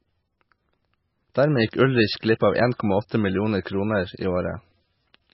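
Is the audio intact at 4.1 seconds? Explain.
No. At 4.1 s, as throughout, nothing sounds above about 5.6 kHz and the sound turns watery, likely from MP3 compression at a very low bitrate, around 18 kbps.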